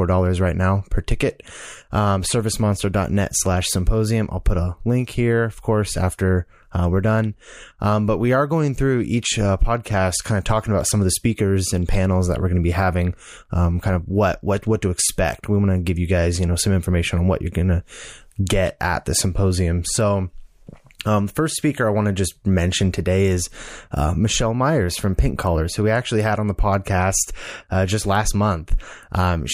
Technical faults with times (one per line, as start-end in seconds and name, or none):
none